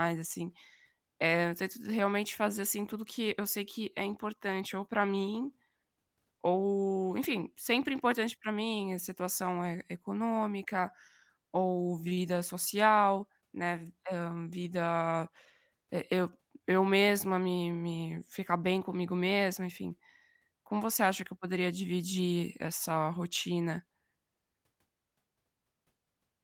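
Nothing in the speech here points to a technical fault, so there's nothing to flag along the way.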